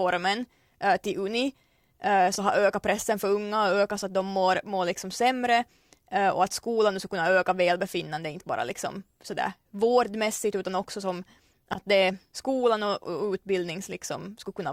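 Two adjacent frames in this speech arrived in the wrong order and were decoded that way, a case of frames out of order, at 2.33 to 2.38 s just before "har ökat pressen för", and at 11.71 to 11.79 s between "vårdmässigt utan också som" and "det skolan och". Each swapped stretch, consistent with single 20 ms frames, plays its two halves exchanged, giving a brief garbled flutter, though no time is lost.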